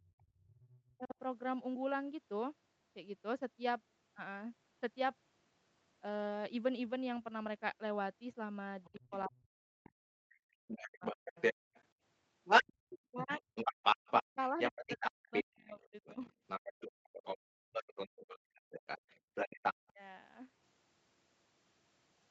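Speech over a call line, and it's got classic echo-canceller trouble. From 0.18 to 0.93 s there's the other side's voice leaking through, faint, roughly 25 dB under the talker. Then from 8.84 to 19.89 s it comes back a bit louder than the talker, likely because the canceller never got a clean hold on the loudspeaker echo. Alongside that you get speech suppressed in double talk. In the first 1.17 s the talker dips for about a third of a second in total, by up to roughly 35 dB. From 8.88 to 20.01 s around 5 s of the talker gets pulled down by up to roughly 40 dB while both sides are talking, likely since the canceller can't tell the two apart. There's also background gated by the echo canceller: the room tone drops out briefly at 0.34 to 0.46 s by about 20 dB, at 11.64 to 11.74 s by about 39 dB, and at 19.2 to 19.34 s by about 32 dB. Each time the canceller clamps the mic hard while the far end plays and then lets go. 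The top end stops at 8 kHz, which fits an Opus call path.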